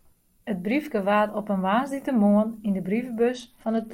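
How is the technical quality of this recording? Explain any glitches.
The speech holds up until a Bluetooth SBC bit pool drop near the end. From 3.33 s to the end of the recording, link congestion pushed the codec into a lower bit pool, which fits a fall from 28 to about 11, around 90 kbps. Starved of bits, the upper sub-bands lose their treble and the remaining bands are coarsely quantised, so the voice turns dull and gritty for that final stretch.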